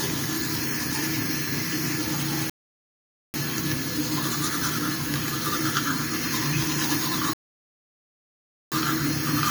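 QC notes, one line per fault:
2.50–3.34 s and 7.33–8.72 s, rebuffering stall: the audio drops to dead silence twice and then carries on exactly where it stopped, with nothing skipped. The player ran out of downloaded data and waited for more to arrive before resuming. Because no audio is lost, each gap just stretches the clip, adding about 0.84 s at the first stall and 1.38 s at the second.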